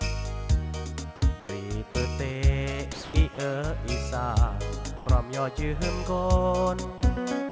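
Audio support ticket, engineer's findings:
Sound dropped by the voice detector, six spots: 1.40–1.49, 2.93–3.14, 3.35–3.38, 4.97–5.06, 6.98–7.01, 7.49 s to end. Sound swaps to steady comfort noise, likely the sender's VAD gating low-level bits; nothing above 8 kHz on the call path, which fits G.722.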